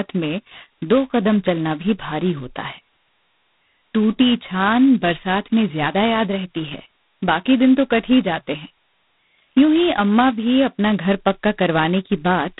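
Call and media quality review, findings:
G.726 ADPCM, whole clip: very coarse predicted-difference coding, consistent with 16 kbit/s mode. Harsh rasping hiss riding the speech level; nothing above 3.9 kHz.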